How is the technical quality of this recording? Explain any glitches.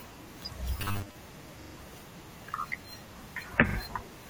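The recording has two kinds of glitch: a stretch of robotic sound and two stutters from repeated frames.

From 0.80 to 1.15 s the speech turns into a rigid, metallic buzz pitched at 100 Hz. This is robotic sound from repeated short buffers, likely caused by audio arriving too seldom, so the playback path loops a 10 ms slice to fill the gap. Most of the real audio in that span is lost. Unlike a frame stutter, this imposes a steady pitch across a longer stretch rather than replaying a recognisable chunk.

Repeated frames occur at 1.61 to 1.74 s and 3.68 to 3.76 s. A 42.7 ms block of compressed audio, which fits a pair of codec frames, plays again three times in the first event and twice in the second. That adds 128 ms and 85 ms to the clip. Each one sounds like a quick stutter. There is no buzzing tone, which separates it from the robotic section.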